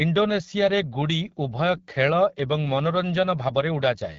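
Speech coded throughout with the AMR wideband (HD Voice) codec. The raspy, rough texture points to one of its lowest rates, around 8.85 kbit/s. Unlike narrowband telephone coding, which stops near 3.4 kHz, the band here reaches about 7 kHz and is empty above 7.5 kHz.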